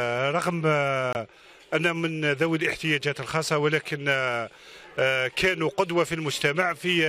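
At 1.13 s a compressed frame arrives with flipped bits, the decoder rejects it, and the player substitutes silence: a corrupt frame muted. The audio drops out abruptly from 1.13 to 1.16 s, a gap of about 32 ms whose length points to a single lost frame. Sound resumes right after the hole with no shift in timing, since the silence fills exactly the slot the damaged frame would have occupied.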